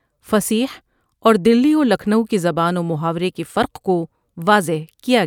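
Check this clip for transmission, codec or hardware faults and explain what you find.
Nothing in this speech recording points to a fault in how the signal was carried, encoded or captured, and its level and continuity hold steady throughout.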